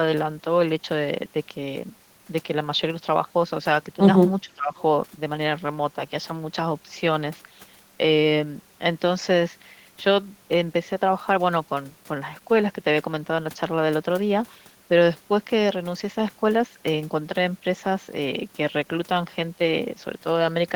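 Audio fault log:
4.43 to 4.76 s, speech suppressed in double talk: the speech suddenly sags here, dropping by roughly 25 dB at its deepest for about a third of a second before coming back to full level. That pattern likely comes from both ends talking at once. The echo canceller couldn't tell this talker apart from the loudspeaker echo, so it clamped down on everything and took the wanted speech out along with the echo.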